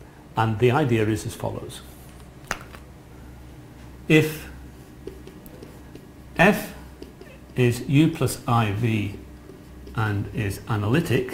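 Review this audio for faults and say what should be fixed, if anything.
Crude rate conversion runs throughout: a gritty, inharmonic fizz tracks loud and high-frequency sound, sitting roughly 30 dB below the signal. Samples were repeated rather than filtered, which fits a nearest-sample conversion from 44.1 kHz to 48 kHz. A spectrogram shows faint mirrored partials unrelated to the harmonics, and a zoomed waveform shows stair-stepped duplicated samples. Resample with a proper band-limited filter, such as a windowed-sinc or polyphase resampler, instead of copying nearest samples.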